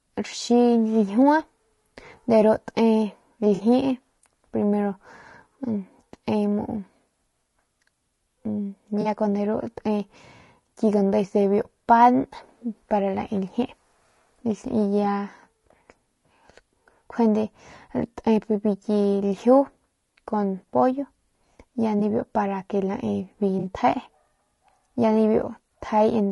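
Throughout the speech, the voice sounds rough and grainy, with noise filling the gaps between harmonics and a thin, synthetic top band. This is likely low-delay AAC compression (AAC-ELD). Its short frames resolve pitch poorly, and the damage fits a bitrate around 32 kbps.

AAC frame loss with concealment appears at 3.55–3.61 s, at 9.01–9.07 s just before "kun de", at 21.99–22.02 s, and at 23.59–23.66 s. In each gap of roughly 20 to 40 ms, the decoder refills missing frames from the previous spectrum, leaving brief smeared, noisy patches.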